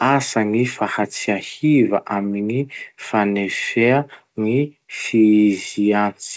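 The clip is speech, and nothing in it is technically wrong.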